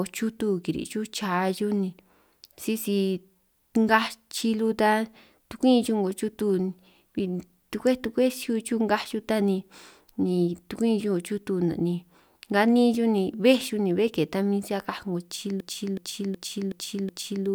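At 15.60 s the system hangs: the computer or its audio driver stops supplying new data while the sound hardware keeps replaying its ring buffer. The result is a system hang loop that runs until 17.46 s, with one 0.37 s slice of speech repeated exactly five times at about 2.69 Hz, a length that fits a 16384-sample buffer. Because the buffer is long, this sounds like a slow, mechanical stutter rather than a buzz.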